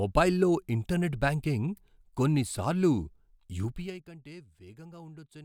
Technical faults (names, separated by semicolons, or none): zipper noise